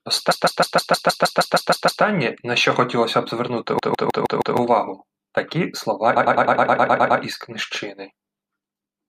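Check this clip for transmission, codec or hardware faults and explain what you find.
The speech shows repeated frames, a short block of compressed audio played again and again, stuttering at 0.30–2.03 s and 3.78–4.56 s (157 ms loops) and 6.15–7.20 s (104 ms loops).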